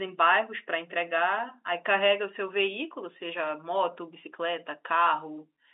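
No technical faults can be heard in the speech, which comes across as ordinary G.711 mu-law telephone audio at 64 kbps, confined to the usual line band of about 300 Hz to 3.7 kHz.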